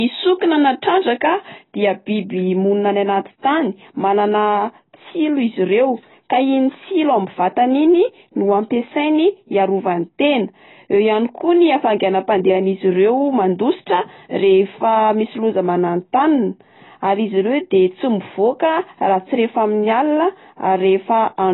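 AAC compression runs throughout: nothing remains above 3.9 kHz, leaving the speech dull and smeared, likely from AAC-LC squeezed to a bitrate around 16 kbps.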